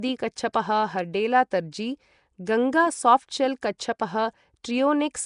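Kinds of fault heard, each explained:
Nellymoser compression: likely the Nellymoser Asao codec at a rate fitting 44 kbps, filling weak bands with noise, so the speech sounds hissy and smeared, with nothing above 10.6 kHz.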